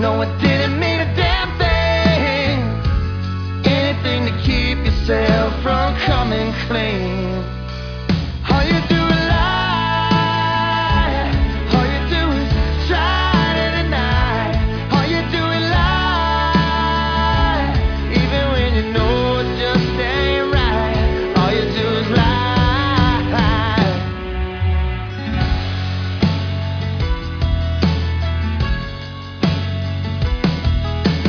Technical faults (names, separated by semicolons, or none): none